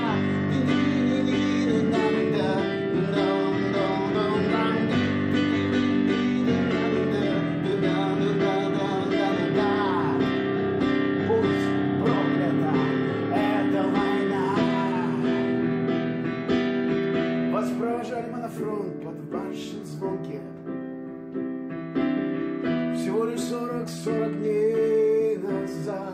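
No technical faults are audible anywhere in this audio.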